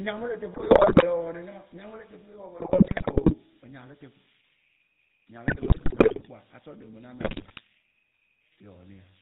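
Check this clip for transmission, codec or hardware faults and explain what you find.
Yes, three faults are present.

GSM full-rate codec runs throughout. The speech is band-limited to 4 kHz and has a buzzy, gravelly roughness, which fits the 13 kbps full-rate coder. It models the vocal tract and excites it with sparse, regularly spaced pulses. On a spectrogram, nothing appears above 4 kHz and the harmonics look coarse.

Converter idle tones also run throughout. A whistle sits around 3 kHz at about -22 dB relative to the speech. It comes from an undithered delta-sigma converter locking into repeating bit patterns on small inputs. It is clearest in pauses and makes a grainy texture under quieter speech. A spectrogram shows a thin horizontal line near 3 kHz.

GSM bit errors occur from 0.54 to 1.05 s, 2.58 to 3.35 s, 5.48 to 6.27 s and 7.20 to 7.60 s. The damage is consistent with bit error rates around 5 percent on a weak link. 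Corrupted filter, pitch and gain values make the speech break into squawks, pops and gargling. The waveform shows sudden level spikes, and the spectrogram shows smeared, blocky frames.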